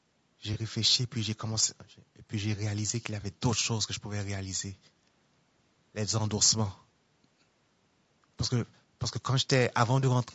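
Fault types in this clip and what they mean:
Low-delay AAC compression: The speech sounds rough and grainy throughout, with noise filling the gaps between harmonics and a thin, synthetic top end. The likely cause is AAC-ELD coding, whose short frames resolve pitch poorly, at a rate that fits about 32 kbps.
AAC frame loss with concealment: Brief smeared, noisy patches appear at 0.53 s and 3.21 s, each lasting a few tens of milliseconds. Each time, about 20 ms of audio went missing, and the decoder filled the gap from the preceding spectrum.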